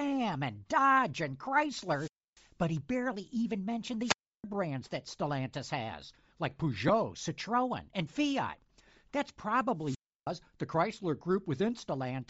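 From start to finish the speech has a breathy, grainy edge, with the upper frequencies smeared into something like fizzy noise rather than clean detail. This is most likely Bluetooth LC3 compression. The codec discards much of the upper spectrum and fills the gap with shaped noise, producing that synthetic haze. How plainly the damage comes through points to a low bitrate, around 32 kbps, using the short 7.5 ms frames.

From 1.81 to 2.50 s there is a wireless microphone squelch dropout. Hiss or static swells, then the sound falls into a hole of near silence lasting about 290 ms before the voice returns with "but he barely even". The same pattern recurs from 4.01 to 4.44 s, right after "he barely even mentioned" and before "brands that", with a mute of about 320 ms. A third comes from 9.78 to 10.31 s, also muting for about 320 ms. Each time, the FM radio link from the microphone has faded far enough that the receiver's squelch shuts the output off until the signal recovers.

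At 6.88 s, just after "has like", lost LE Audio frames cause a tiny grainy smear in place of a moment of clean sound. The decoder covers a dropped packet by repeating the previous frame's spectrum with randomised phase, so a brief noisy patch replaces the signal. It is very short, which fits a single missing 7.5 ms frame, so it passes as a small blur rather than a gap.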